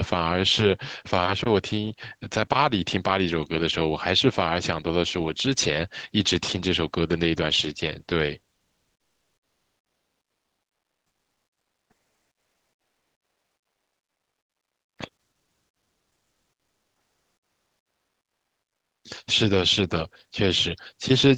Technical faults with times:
8.55-14.97 comfort noise in place of the background

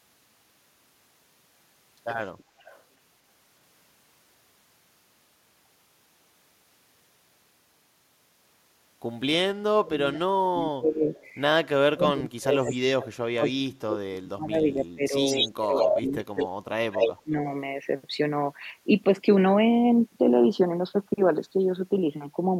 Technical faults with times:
2.59-2.81 echo leak
9.84-11.14 speech suppressed in double talk
11.14-11.29 echo leak
11.91-15.15 speech suppressed in double talk
15.25-16.02 echo leak
15.56-17.35 speech suppressed in double talk
16.37-16.48 echo leak
16.92-17.13 echo leak

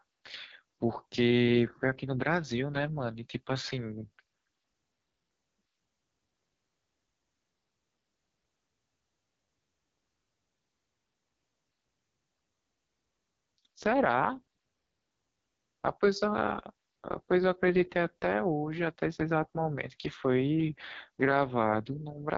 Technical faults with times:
0.00-22.37 AMR wideband (HD Voice) codec

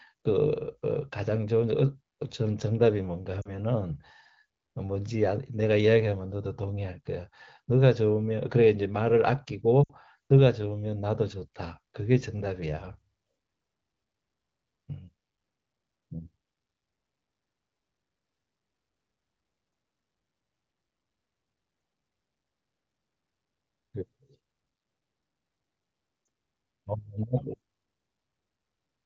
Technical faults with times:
3.41-3.51 lost AMR speech frames
9.84-9.93 lost AMR speech frames
26.25 lost AMR speech frames

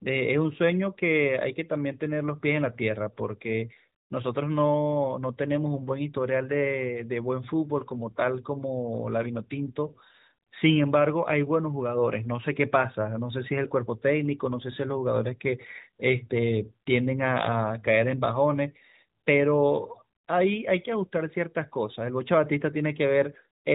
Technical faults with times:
none

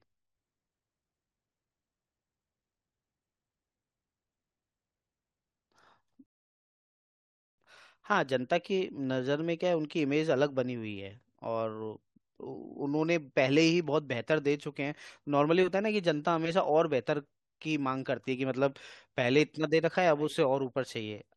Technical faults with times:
6.26-7.58 rebuffering stall

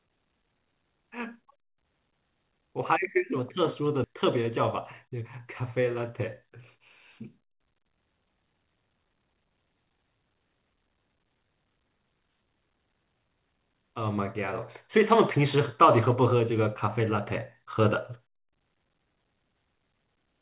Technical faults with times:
4.04 skip ahead
5.05-6.76 jitter buffer speed-up
7.23-8.32 jitter buffer speed-up

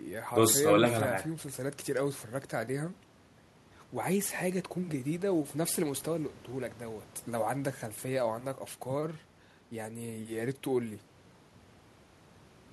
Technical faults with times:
none

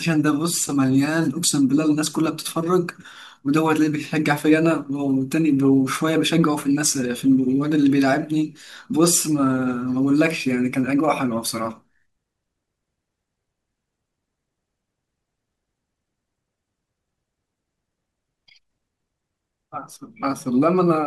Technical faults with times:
none

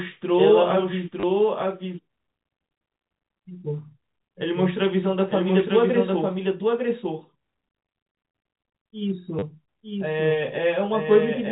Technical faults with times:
0.00-11.51 doubled audio track
1.20-1.23 packet loss with last packet repeated
9.39-9.42 packet loss with last packet repeated

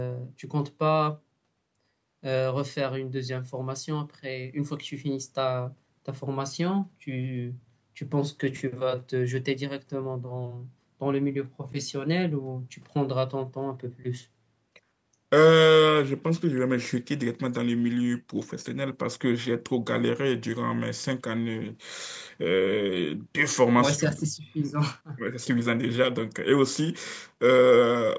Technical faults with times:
none

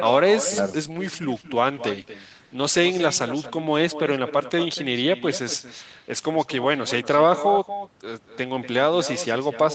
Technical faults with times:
0.00-9.74 echo with no canceller
0.83-5.05 call bitrate drop

